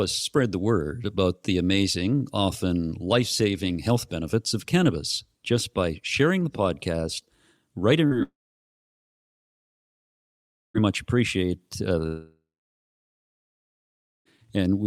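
Right after "sharing the podcast writing", at 8.07 to 8.14 s, there's short concealed packet loss: about 40 ms went missing, so the decoder patched it with a quick smear. Then what sounds like a long network dropout likely hits twice. From 8.23 to 10.77 s the tail fades into roughly 2.4 s of silence until "much appreciate uh". Just after that phrase, from 12.06 to 14.28 s, the audio dies again for about 1.8 s.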